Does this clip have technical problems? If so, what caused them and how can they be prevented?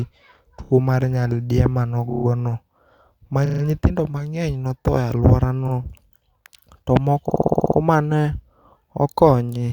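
Yes. Repeated frames cause stutters at 0.64–0.70 s (before "mar nyaldiemo"), 2.09–2.25 s (after it), 3.45–3.62, 5.67–5.73 and 7.29–7.78 s. Blocks of 30–60 ms replay up to eight times, adding 60–480 ms. The spectrogram shows identical repeating slices, and the waveform shows copied segments. Writing each frame only once, with sequence-number checks, prevents it.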